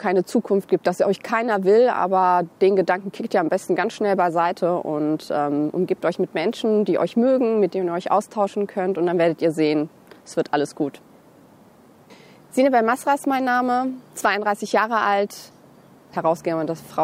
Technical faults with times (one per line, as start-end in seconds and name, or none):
3.87-6.78 sample clock jitter